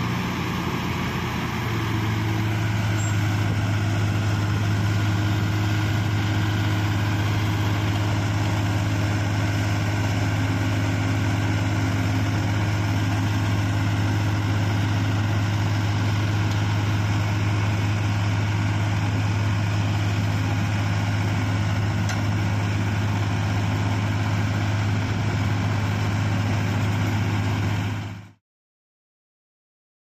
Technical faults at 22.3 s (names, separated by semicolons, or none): none